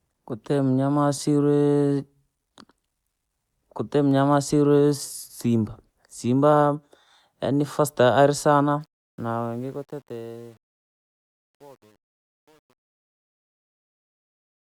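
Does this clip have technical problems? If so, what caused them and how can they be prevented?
Yes: truncation distortion on the fade-out from 8.81 to 14.76 s, worst after 9.75 s, turns gritty, consistent with about 9-bit resolution; the waveform shows stair-steps and the spectrogram broadband grit. Keep higher bit depth and dither before reducing word length.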